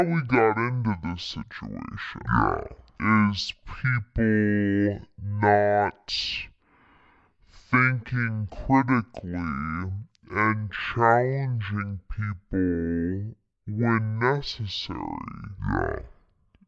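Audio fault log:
throughout, wrong sample rate: the speech runs at half speed and drops a full octave, which fits 48 kHz audio being played back at 24 kHz without conversion.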